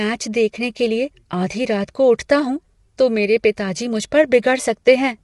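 Throughout, the speech sounds rough and grainy, with noise filling the gaps between harmonics and nothing above 11.6 kHz, likely low-delay AAC compression (AAC-ELD) at a rate near 32 kbps. Its very short frames blur pitch harmonics rather than smearing attacks as pre-echo.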